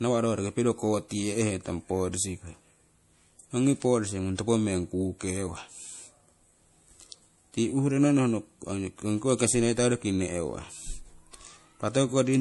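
Throughout, the speech has a watery, swirly quality with nothing above 11.5 kHz. That points to low-bitrate MP3 compression, likely around 48 kbps. A spectrogram shows a flat ceiling and flickering holes.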